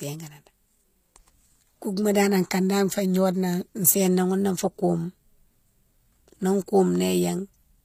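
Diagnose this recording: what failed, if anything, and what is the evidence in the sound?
The failure is at the codec stage. For the full length of this speech clip, the treble sounds synthetic: s sounds come out gritty and metallic, and the damage is plainly audible. Nothing is present above 15.5 kHz. The likely cause is HE-AAC compression, probably HE-AAC v2 at a low rate consistent with about 24 kbps. The upper band is rebuilt by spectral band replication, so its harmonics don't align with those below. On a spectrogram, the upper band shows repeated copies of lower-band patterns under a coarse, blocky envelope and a hard ceiling at 15.5 kHz.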